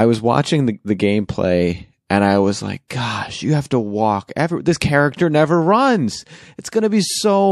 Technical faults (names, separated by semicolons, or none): pre-echo